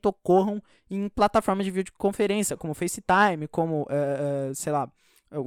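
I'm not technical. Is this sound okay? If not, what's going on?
Yes, this sound is okay, and nothing is going wrong in it.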